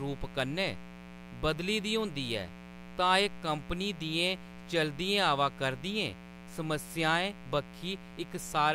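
Mains buzz runs throughout: switching spikes on a 60 Hz supply leak into the speech path, adding a steady, raspy buzz rich in harmonics, fairly prominent beneath the speech.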